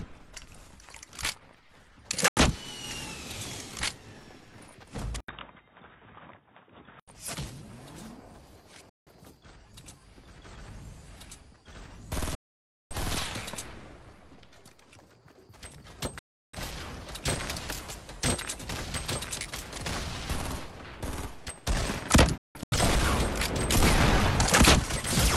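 At 2.28 s a digital broadcast dropout mutes the audio for 85 ms with a 3 ms fade, consistent with two lost frames. From 5.20 to 7.08 s the sound turns dull and boxy, with nothing above 3.8 kHz and an 80 ms gap at the switch. The likely cause is an input switched to a poorer device. Further dropouts follow at 8.89 s (171 ms), 12.35 s (555 ms) and 16.19 s (341 ms). At 22.38 s several short holes are scattered over 341 ms.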